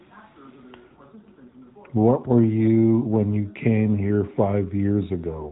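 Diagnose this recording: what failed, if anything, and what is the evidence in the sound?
Nothing failed; the recording shows no faults.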